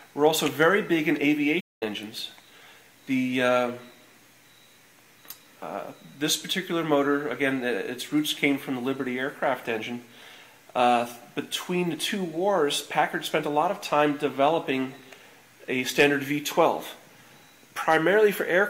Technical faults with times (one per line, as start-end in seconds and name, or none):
1.60-1.83 playback stall
16.00-16.06 hard clipping
17.89-17.96 hard clipping